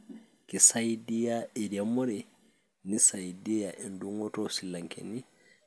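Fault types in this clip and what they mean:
No technical faults can be heard in the speech recording; the signal holds steady throughout, with no dropouts, distortion or interruptions.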